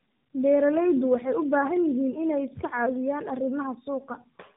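From start to finish the speech carries tandem speech coding: it sounds decoded and re-encoded through two low-rate speech coders in a row, which fits a G.723.1-type stage followed by AMR-NB. Nothing reaches above 3.7 kHz, and the compounded roughness, muffling and warble exceed what a single narrowband codec leaves.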